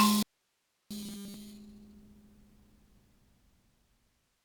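A short music clip with two faults. From 0.23 to 0.91 s there is an audio dropout to a faint residue. For 680 ms the music vanishes abruptly, leaving only hiss about 45 dB down. Because the channel stays live, this is a dropout rather than a fade or a deliberate rest, and the likely cause is a lost signal upstream. From 1.02 to 1.34 s the music turns into a robotic sound from repeated short buffers. A rigid metallic buzz fixed at 200 Hz appears, which fits a 5 ms buffer being replayed while most of the real audio is skipped. That fixed pitch is what separates it from ordinary distortion. The likely cause is audio arriving too seldom for playback.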